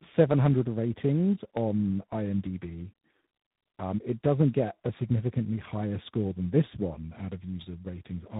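Throughout, tandem speech coding, which fits a G.729A-to-G.726 chain, leaves the speech rough, muffled and warbly, with a spectrogram empty above 3.8 kHz.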